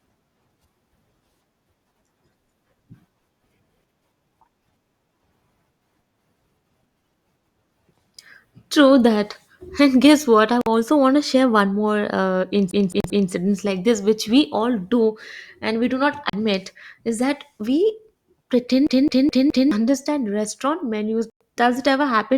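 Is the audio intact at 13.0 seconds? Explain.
No. A CD stuck on one turn runs from 12.71 to 13.31 s, ending just before "like this which". A scratch keeps knocking the laser back one track at the same point on each revolution, so one 212 ms stretch of audio is played three times over, with a brief mute at every jump. The result is the quick, evenly timed stutter of a skipping disc.

Inside that stutter, from 13.00 to 13.04 s, a Bluetooth stall cuts the audio to 39 ms of silence before it resumes. The likely cause is interference holding up packets until the headphones' buffer emptied, so playback waited for the resent data to arrive.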